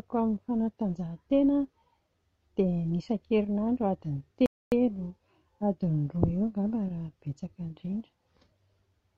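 At 4.46 s the player drained its buffer of downloaded audio before the next data arrived, and playback had to halt and wait. This rebuffering stall shows up as an abrupt drop into silence in the middle of the speech, lasting until 4.72 s. The sound then picks up precisely where it broke off, with nothing skipped or repeated, so the only damage is a gap of about 0.26 s added to the timeline.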